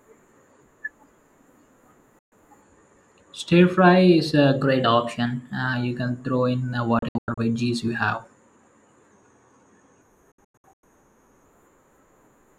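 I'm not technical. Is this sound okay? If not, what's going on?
No. There are two kinds of fault.

Digital broadcast dropout: the receiver lost the incoming signal, muted, and waited for clean data. The speech cuts out almost instantly, in one gap from 2.19 to 2.32 s, then in several short gaps between 6.99 and 7.38 s and between 10.32 and 10.84 s. Whatever was said in those gaps is gone.

Drift correction step: this is likely software that keeps two clocks in step and nudged the playback speed in one jump. From 4.64 to 5.73 s the speech runs about 6% fast and sounds about a semitone higher. From 9.12 to 11.45 s it runs about 6% slow and sounds slightly more than a semitone lower. Each time it snaps back to normal afterwards.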